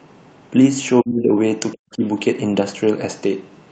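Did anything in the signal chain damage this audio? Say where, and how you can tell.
Yes: speech suppressed in double talk, from 1.02 to 1.31 s and again from 1.72 to 2.03 s, each lasting about 0.3 s. At the call-processing stage, the speech level falls by roughly 25 dB in the first stretch and nearly 40 dB in the second, almost cutting out. This is likely the echo canceller failing to tell the near talker from loudspeaker echo while both sides spoke, so it attenuated everything.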